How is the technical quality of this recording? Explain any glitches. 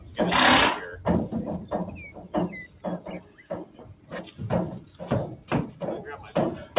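The recording has audible processing damage, heard through a narrowband call path that leaves nothing above 4 kHz, which fits G.711 mu-law at 64 kbps.

Throughout, a noise suppressor applied to music or sounds is at work. A speech-tuned suppressor treats steady tones, ambience and decay as noise. It keeps pushing them down, then letting them back up. The level swings by roughly ten decibels. Sustained parts sink while sharper onsets survive. The result pumps and thins.

At five points the sound is cut by the noise suppressor: 0.00 to 0.15 s, 1.91 to 2.34 s, 2.67 to 2.84 s, 3.20 to 3.46 s, and 3.65 to 4.12 s. The first dip reaches about 6 dB. The others reach about 8 dB. The suppressor judged these passages as noise. They sink in level, or their tails are cut short.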